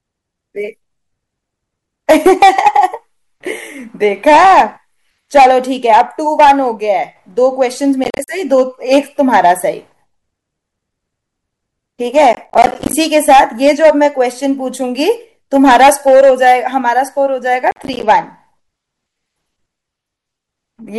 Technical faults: processor overload crackle

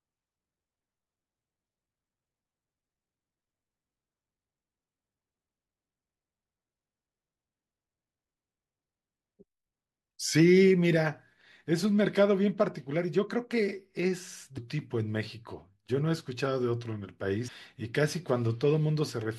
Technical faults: damaged data in a compressed stream

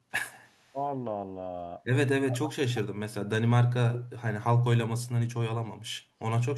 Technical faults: echo leak; speech suppressed in double talk

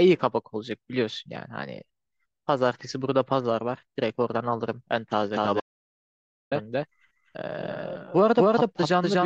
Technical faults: doubled audio track; audio dropout to silence

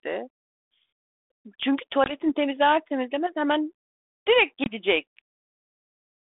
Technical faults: packet loss on an ADPCM call

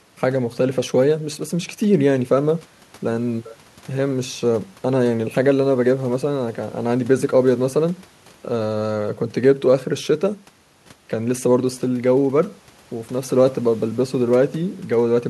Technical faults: none

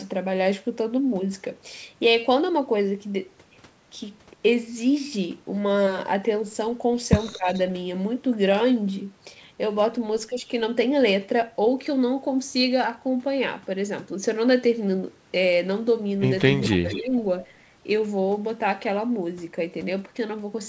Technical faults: speech suppressed in double talk; echo leak

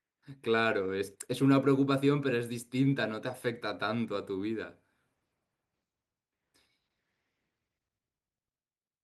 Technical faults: none

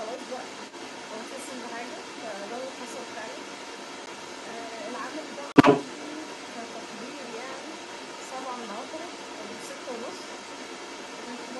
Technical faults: other side's voice leaking through; block of digital silence

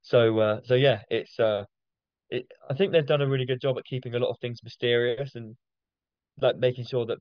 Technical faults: none

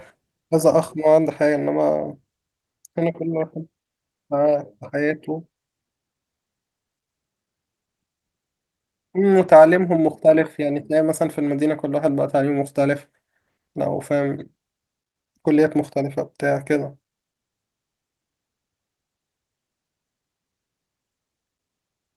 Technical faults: none

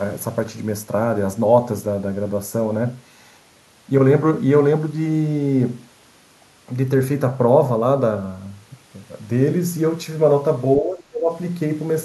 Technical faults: channel delay (comb filtering); speech suppressed in double talk

